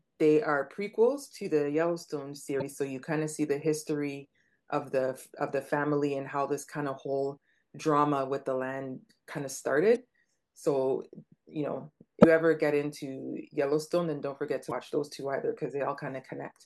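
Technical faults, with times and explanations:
2.58–2.62 s, 9.93–9.97 s, 12.21–12.25 s and 14.68–14.72 s, damaged data in a compressed stream: four short glitches of about 40 ms each cut through the speech. Corrupted bytes in the compressed data throw the decoder off, so it outputs garbage until it resynchronises on the next frame header.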